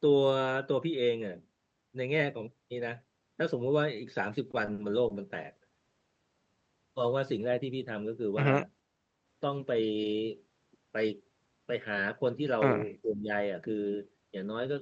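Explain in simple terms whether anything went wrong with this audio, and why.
Between 4.51 and 5.13 s the speech shows repeated stalls (stutter): audio packets arrived late four times, and each time the receiver stretched the last sound to cover the wait, at most 50 ms. Nothing is lost, but the speech drags and stutters.

From 7.51 to 7.85 s there is a jitter buffer speed-up. Too much audio had piled up, so the receiver cut out tiny slices, about 40 ms in total, to catch up. The speech plays about 10% faster at unchanged pitch and sounds briefly hurried.

From 13.02 to 13.29 s the speech dips sharply in level. This is likely speech suppressed in double talk: with both sides talking at once, the echo canceller could not tell this talker from the returning echo and turned the signal down.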